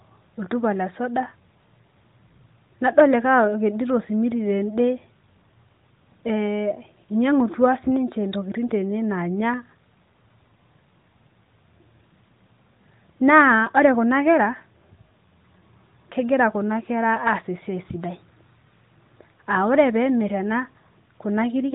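Nothing in the recording stood out on listening.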